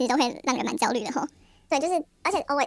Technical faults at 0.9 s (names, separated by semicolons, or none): wrong sample rate